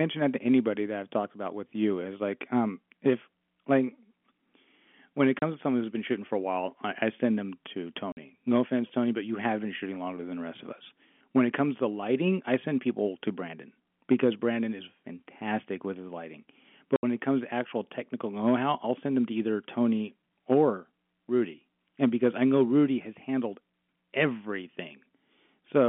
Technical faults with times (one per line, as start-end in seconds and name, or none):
5.39-5.42 packet loss filled with silence
8.12-8.17 packet loss filled with silence
16.96-17.03 packet loss filled with silence